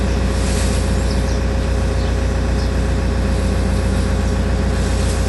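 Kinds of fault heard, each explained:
Dolby Digital compression: the audio sounds dull, with nothing above 11.4 kHz and a rough, fluttering grain around tonal parts, likely from an AC-3 style coder at a bitrate fitting about 64 kbps. Unlike a plain low-pass filter, the lost detail is replaced by dither noise.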